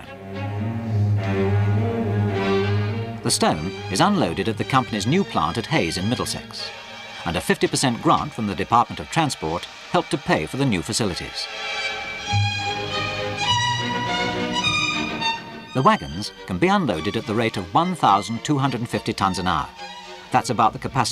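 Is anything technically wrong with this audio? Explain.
No, nothing is technically wrong with this audio.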